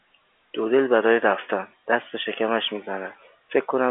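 No technical faults are audible.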